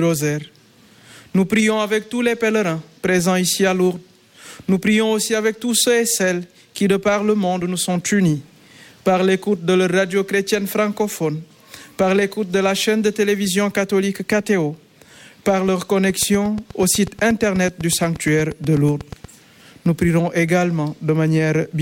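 From 16.10 s to 19.25 s, something is injecting a repeating pulse into the signal path, likely electrical interference from nearby equipment or a faulty connection or power supply. The result is a train of clicks: about thirty near-identical ticks at a steady 8.3 per second, evenly spaced, with peaks roughly 5 dB above the surrounding sound. They sit on top of the audio as a regular ticking and stay audible through the quieter gaps.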